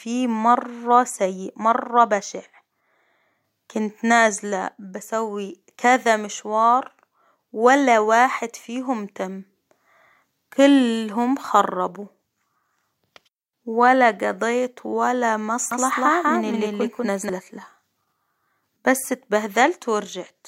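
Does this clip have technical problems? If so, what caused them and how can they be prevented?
Yes: from 15.71 to 17.29 s there's a doubled audio track, the speech repeated about a fifth of a second late at roughly equal level, likely from a second capture path. Monitor only one input route.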